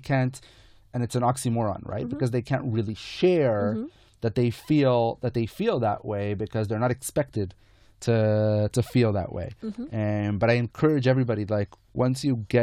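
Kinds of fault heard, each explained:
Nothing stood out on listening to the speech here.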